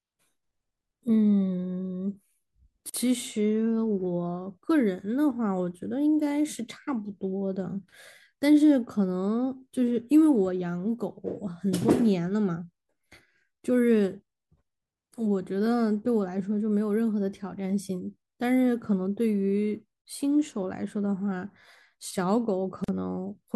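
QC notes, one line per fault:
2.90 s and 22.84 s: gap at a join of encoded pieces, a silence of about 45 ms and 42 ms where untrimmed encoder delay and last-frame padding remain.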